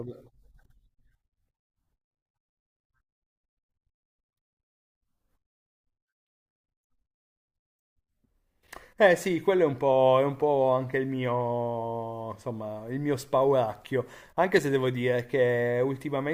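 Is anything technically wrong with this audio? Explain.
No, nothing technically wrong can be heard in this speech recording. There is nothing to point to at any moment in the clip.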